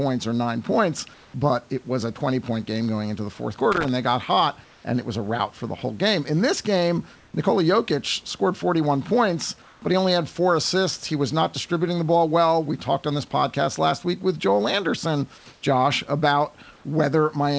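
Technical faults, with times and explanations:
1.14 to 16.84 s, comfort noise in place of the background: at 1.14 to 1.34 s (after "or nine points"), 4.64 to 4.84 s (after "they got hot"), 9.62 to 9.82 s, 15.38 to 15.46 s, 15.54 to 15.62 s and 16.76 to 16.84 s, the room background becomes steady, featureless hiss, slightly quieter in all but the 9.62 s pause, likely synthetic noise filling pauses during discontinuous transmission.
3.72 to 3.89 s, loose connector crackle: a worn contact makes and breaks, chopping the signal between "going into the fourth" and "they got hot and" into an irregular burst of scratchy crackle.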